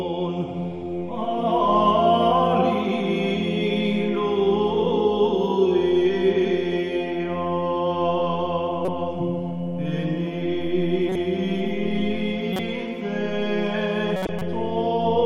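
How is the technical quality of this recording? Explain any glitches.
Four short glitches come from corrupt frames that were decoded, at 8.85 to 8.88 s, 11.09 to 11.16 s, 12.53 to 12.60 s and 14.16 to 14.42 s. In each, damaged bits inside a couple to several compressed frames were played anyway. The decoder misread gains and codes and put energy at the wrong frequencies. Each is heard as a brief chirpy burst of noise peaking around -10 to -15 dBFS. The last one, spanning roughly seven frames, is the longest.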